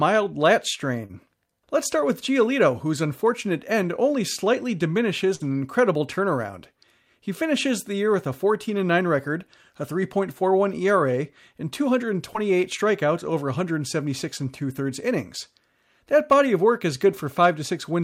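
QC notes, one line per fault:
1.05–1.11 s and 12.33–12.37 s, short concealed packet loss: about 40 ms, then 20 ms, arrived too late and was patched by extending the preceding sound, leaving a brief smear before "strikeouts over".
5.35–5.44 s, burst of packet loss: about 40 ms went missing, covered by 45 ms of fading continuation, then 7 ms dropped, so playback jumps ahead into "incredible turnaround".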